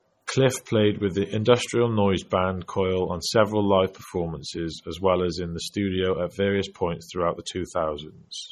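Throughout the speech, the encoding chain likely ran a low-bitrate MP3 stage first and then re-saved the result as a much higher-bitrate MP3, which would explain why the file is large while its quality is still low: low-bitrate audio saved at a high bitrate. The second pass could not restore detail the first had discarded. The sound points to an initial encode around 32 kbit/s, with the later one near 193 kbit/s. Nothing sits above 17 kHz, and the earlier codec's artefacts stay audible from start to finish.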